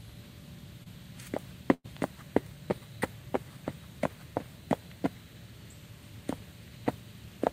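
A recording of everyday sounds with two packet-loss faults near the start. At 0.83 to 0.88 s there is a short concealed packet loss: about 20 ms of audio never arrived in time, and the receiver bridged it by extending the preceding sound for roughly 23 ms before blending back. The result is a brief smear or wobble where that slice is missing. At 1.74 to 1.86 s a burst of packet loss removes about 100 ms. The receiver continues the last sound for about 103 ms, turning it down as the gap lengthens, and the signal drops to silence for about 40 ms before the audio resumes further on, with the intervening material gone.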